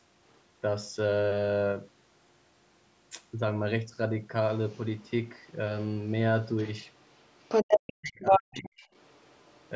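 Other side's voice leaking through, a second, separate voice under the speech, is faint at 0.30–0.39, 4.68–5.10, 5.39–5.55 and 8.94–9.70 s. It is louder than the talker at 6.44–7.93 and 8.21–8.42 s, likely from incomplete echo cancellation.

Speech suppressed in double talk follows at 7.69–8.83 s. The talker's own voice drops by up to about 40 dB while the echo continues, likely the canceller ducking both. A plain dropout would silence everything at once.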